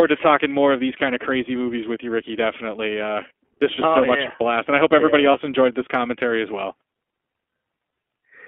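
Across the whole speech clip the iLBC codec is plainly audible: a narrowband sound cut off below 250 Hz and above 3.4 kHz, clear but rough and slightly synthetic, consistent with the 15.2 kbps mode and 20 ms frames. A spectrogram shows an empty band above 3.4 kHz.

Lost iLBC frames follow at 0.98 to 1.00 s, between "talking more of these" and "of crazy movies with"; at 3.76 to 3.80 s, just before "oh so much blast"; at 5.32 to 5.35 s, between "I hope everybody yeah" and "enjoyed this commentary as"; and at 7.92 to 7.96 s. The decoder filled each gap by repeating the last pitch cycle with added noise, so each sounds like a brief held, buzzy vowel. The last gap is twice as long as the others, about 40 ms against about 20 ms. On a spectrogram each shows as a short stretch of flat, repeated harmonics. Speech sounds normal again immediately after each gap.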